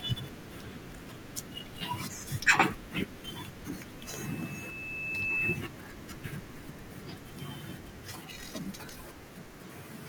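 A speech recording with loudspeaker feedback squeal from 3.99 s to 5.62 s. A pure tone near 2.6 kHz swells over roughly a second and a half until it sits about 10 dB above the speech. The microphone is hearing its own loudspeaker, and the loop gain exceeds one at that frequency.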